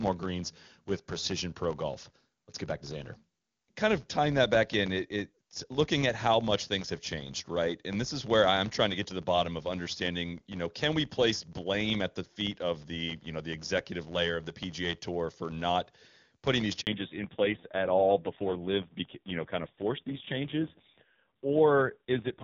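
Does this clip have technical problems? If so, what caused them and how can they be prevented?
Yes. A filter restarted on every block runs through the whole clip. Each block starts from silence, so a small transient repeats as a buzz near 86 Hz that tracks the speech level. That rate fits a 512-sample block. Carrying the filter state across block boundaries prevents it.

At 16.81 s there is a handover gap. The call switched networks and no speech frames arrived for 60 ms. The speech fades out and goes silent until the new link starts at 16.87 s. Seamless handover or jitter-buffer concealment would help.

From 16.87 s to the end there is a fallback to narrowband. The call dropped from AMR-WB at 23.85 kbit/s to AMR-NB at 5.9 kbit/s. Nothing remains above 4 kHz, and the speech sounds duller and rougher. Keeping the call on an HD Voice path prevents this.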